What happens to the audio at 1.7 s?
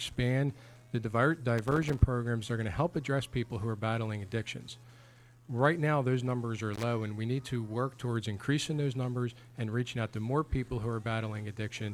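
At 1.7 s there is loose connector crackle from 1.58 to 2.00 s: a worn contact rapidly breaks the signal, giving irregular scratchy bursts, seen as ragged gaps and broadband vertical streaks.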